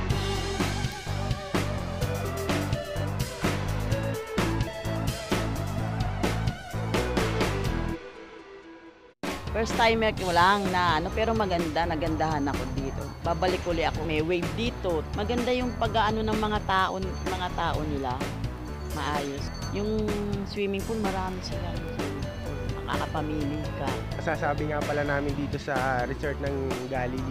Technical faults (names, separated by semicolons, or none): word clock ticks